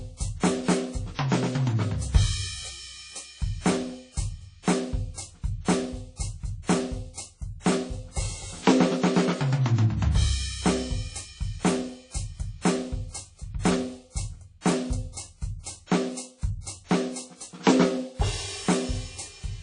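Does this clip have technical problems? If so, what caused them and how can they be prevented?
Yes. The whole piece of music carries plainly audible codec damage that sounds like WMA compression, likely from an aggressive encode. There's nothing above 10.1 kHz, so the top end is dull and closed in, and the music gets a washy, ringing quality with hiss that swells and fades along with it. The quantiser throws away the weaker detail and smears its noise across long transform blocks, which fits a bitrate down around 32 kbps. To prevent it, encode at a much higher bitrate or with a better codec, or keep a lossless master.

There's also a pre-echo from 4.63 to 4.67 s. Right before a sharp attack there's a brief hiss, spread over about 46 ms, and the attack itself lands soft and smeared instead of crisp. The transform block containing that hit spreads its quantisation noise evenly, so the noise that belongs to the loud onset leaks into the quiet moment just ahead of it. 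To prevent it, use a higher bitrate or an encoder that switches to short blocks on transients.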